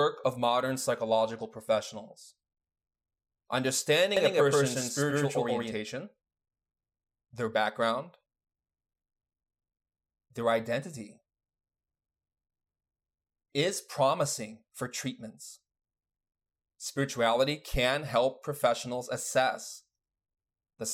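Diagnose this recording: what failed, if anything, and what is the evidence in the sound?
Doubled audio track, 4.17–5.73 s: an equally loud copy about 150 ms behind, switching abruptly with no decay, unlike echo; likely a second capture path.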